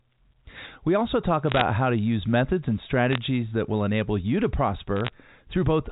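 Bit errors on a digital phone line crackle from 1.50 to 1.61 s after "also talk", from 3.11 to 3.18 s after "to use methods and", and from 4.97 to 5.13 s after "will enable you to". Flipped bits corrupt single samples, producing sharp ticks over the 4 kHz-limited G.711 telephone sound.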